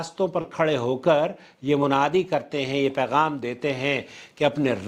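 A brief smear at 0.41 to 0.46 s is short concealed packet loss: about 20 ms never arrived, and the decoder bridged it by extending the preceding sound.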